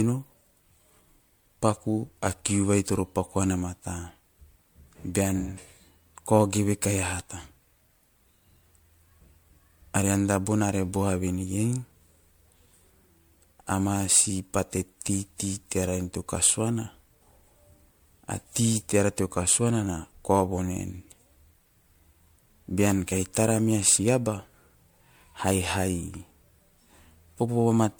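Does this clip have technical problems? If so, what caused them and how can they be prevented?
Yes. The speech was likely decoded and re-encoded as MP3 about four times, each pass requantising on a shifted frame grid. This generation loss makes the whole clip swirly, smeared and hollow, with blurred consonant attacks, worse than a single encode near 96 kbit/s would sound. Keep a lossless master and encode to MP3 only once, as the final step.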